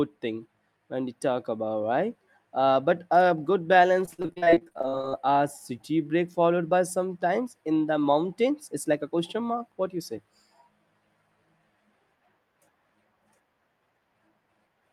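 From 4.05 to 5.14 s the speech turns choppy and robotic, with small pieces missing. This is repeated packet loss (robotic sound): audio kept failing to arrive over that stretch, and each hole was patched by stretching out the last sound received. The rapid stutter suggests around twenty separate dropouts, the longest about 41 ms, with roughly 43 percent of the span filled in rather than genuinely heard.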